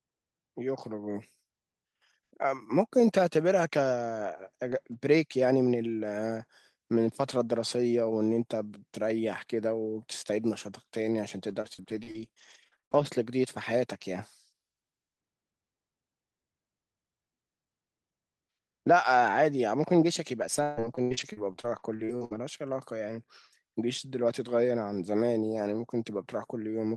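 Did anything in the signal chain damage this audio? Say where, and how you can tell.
Yes, at the network stage: repeated packet loss (robotic sound) at 11.49–13.05 s and again at 20.41–22.37 s. Each stretch has a rapid run of short holes, the longest 56 ms in the first and 141 ms in the second, with about 22% and 29% of the span concealed. The receiver papers each hole over by extending the last sound, which gives the choppy texture with pieces missing. On a spectrogram the harmonics freeze into repeated horizontal stripes. The waveform shows near-identical copied cycles.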